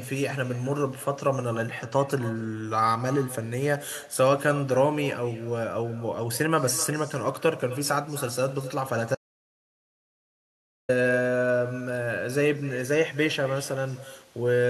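From the first second there's an uncancelled echo: every phrase comes back roughly a third of a second later, about 16 dB down and thinner. The far end's loudspeaker is feeding its microphone, and nothing on that path strips the return.

Then from 9.15 to 10.89 s the audio drops out to dead silence, with no room tone at all, for about 1.7 s before the speech picks up again mid-flow. That's likely the input going missing while the recorder kept writing silence.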